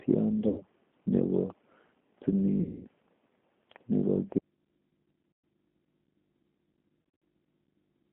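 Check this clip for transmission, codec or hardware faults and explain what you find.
Two faults are present: low-bitrate speech coding across the whole clip, and four bursts of lost packets that the decoder papers over.

G.729 codec, throughout: the speech is rebuilt from a vocal tract filter, a pitch predictor and a few pulses per frame, which fits 8 kbit/s G.729A. The band is confined to roughly 200 Hz to 3.4 kHz, and the voice has a plainly rough, synthetic edge.

VoIP packet loss concealed by the speech codec, at 0.48 to 0.63 s, 2.61 to 2.87 s, 5.32 to 5.44 s and 7.02 to 7.22 s: the decoder extrapolates from its last pitch and filter while lowering the gain. Missing stretches last 100, 240, 120 and 140 ms. The final one is scattered over 200 ms, with its longest gap 60 ms. These losses come out as buzzy, fading smears, and the voice stays weakened briefly after each.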